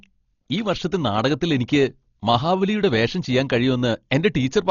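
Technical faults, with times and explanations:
Throughout, Dolby Digital compression: the speech is dull and cut off with nothing above 7 kHz, and there's a rough, fluttering noise around the tones. That's likely a starved AC-3 encode, consistent with about 32 kbps, where many frequency lines get no mantissa bits and are filled with noise.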